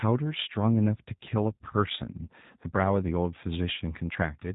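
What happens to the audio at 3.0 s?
At 3.0 s the speech carries G.729 codec damage present throughout: rebuilt from a vocal tract filter and sparse pulses, consistent with an 8 kbit/s stream, it sounds rough and synthetic, with nothing above 3.8 kHz.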